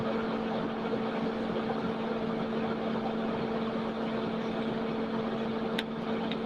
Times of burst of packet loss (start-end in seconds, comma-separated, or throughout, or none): none